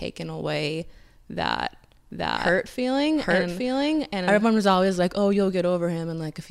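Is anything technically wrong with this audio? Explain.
Yes. From 2.11 s to 4.43 s, right after "away that" and ending before "was always like", the speech carries a doubled audio track: a second full-band copy trails the original by roughly 0.7 s at about the same loudness. It has no reverberant tail or room colouring, and it switches on and off abruptly at both edges. The likely cause is the signal being captured a second time through a slower path, or an edit leaving two offset copies mixed together.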